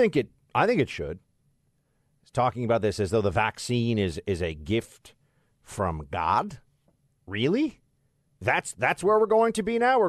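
A speech recording with nothing technically wrong with it.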